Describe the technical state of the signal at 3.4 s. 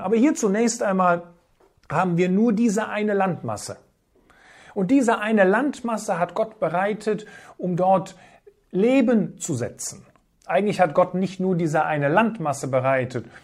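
At 3.4 s the speech signal is intact, with no audible fault at that moment.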